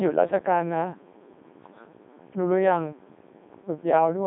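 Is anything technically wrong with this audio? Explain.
Yes, the speech has gone through a Codec 2 vocoder for the whole clip. There's nothing above about 3.8 kHz, and it's squeezed into a phone-like band of roughly 200 Hz to 3.6 kHz. The heavy, buzzy robotic character fits Codec 2's top 3.2 kbit/s mode. The codec doesn't keep the waveform at all. It sends pitch, voicing, energy and a rough spectral shape, then rebuilds the voice from sine waves. That's why it sounds synthetic and buzzy rather than just muffled.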